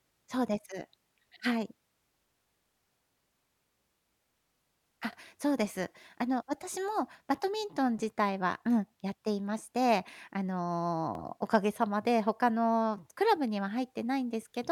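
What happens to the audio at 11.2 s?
At 11.15 to 11.18 s the speech hits a case of overlapping chunks: the audio was handled in blocks about 6 s long, and the next block begins before the previous one has finished, so about 25 ms of material at the join is played a second time. To the ear that doubled sliver comes across as a brief click or tiny stutter, a small hiccup where the sound momentarily repeats itself before carrying on.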